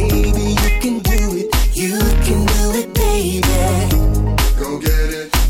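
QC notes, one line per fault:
0.64, 1.05–1.53, 2.11, 3.02, 3.43–3.55, 4.38, 4.86 and 5.34–5.36 s: integer overflow. Loud peaks barely over full scale, by about 1 dB at most, wrap to the opposite sign instead of limiting, giving violent cracks.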